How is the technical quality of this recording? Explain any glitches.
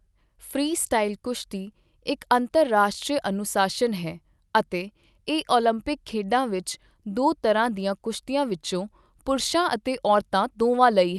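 No glitches or faults heard.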